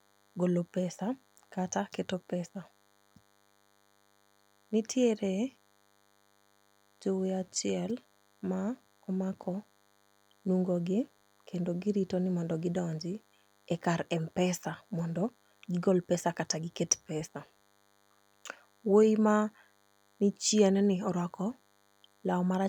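From start to finish, a DECT cordless phone buzz runs under the speech: a thin, steady buzz at 100 Hz, sitting roughly 40 dB below the voice, so it is clearest in pauses. A nearby DECT handset or base transmits a short radio burst every 10 ms, and the audio circuitry rectifies it. A spectrogram shows evenly spaced horizontal lines at 100 Hz and its many harmonics across the whole clip, and a zoomed waveform shows small pulses repeating every 10 ms during gaps.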